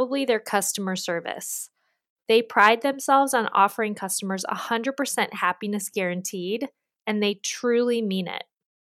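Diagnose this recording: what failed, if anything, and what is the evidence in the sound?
Brief crackle on speech peaks from 2.59 to 2.68 s, before "themselves on offering customers": hard clipping, peaks overdriven about 2 dB and cut flat at a converter or gain stage.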